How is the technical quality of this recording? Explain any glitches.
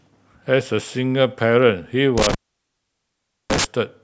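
The recording has one clear glitch, an intermittent contact, from 2.18 s to 3.65 s. Within that span the speech drops out for about 1.15 s. A loose cable or plug has briefly lost its connection. Signal stops passing while the contact is open. The break comes with crackle as the contact breaks and again as it reconnects. Between those edges, only a faint hiss remains where the speech should be.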